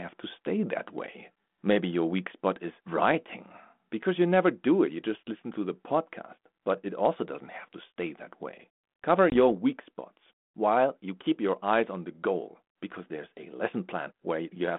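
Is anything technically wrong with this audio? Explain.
Yes. At 9.3 s there is packet loss on an ADPCM call. About one packet, roughly 20 ms of speech, drops out and is replaced by silence. Because G.726 ADPCM (here at 32 kbit/s, band-limited to about 200 Hz to 3.5 kHz) codes only differences from an adaptive prediction, the decoder's predictor and step size lose track of the sender's. Speech therefore resumes slightly distorted, recovering by 9.37 s. A waveform shows a flat, hard-edged gap. A spectrogram shows a blank vertical band.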